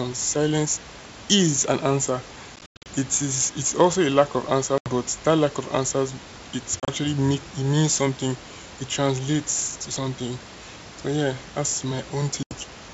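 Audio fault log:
2.56–2.87 s, 4.78–4.89 s, 6.80–6.90 s, 12.43–12.54 s: packet loss on an ADPCM call. Lost packets leave hard silent gaps, the first scattered after "silence is an answer". The decoder's predictor then resumes out of step, giving slightly distorted speech that settles within some tens of milliseconds.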